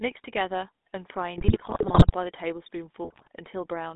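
This is a speech clip heard through the GSM full-rate codec for its whole length. The band runs from about 250 Hz to 3.7 kHz, so the lows are thin and there is no air on top. The coder rebuilds the voice from a vocal-tract filter fed by a sparse, regularly spaced pulse train. That gives a plainly audible buzzy, gravelly roughness to the voice. The character fits the 13 kbps full-rate coder. GSM bit errors break in twice, from 1.38 to 2.15 s and again from 3.04 to 3.28 s. Corrupted bits are reaching the decoder. Damaged filter, pitch and gain values twist the spectrum frame by frame and make the level jump. The voice turns to squawks, pops and gargling. The first burst is longer and spans many frames, at an error rate of about 3.9 percent. The second is shorter but has a higher error rate, about 4.7 percent.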